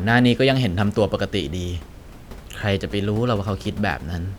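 Nothing stood out on listening to this speech, with only the room's own background noise sitting about 21 dB below the talking.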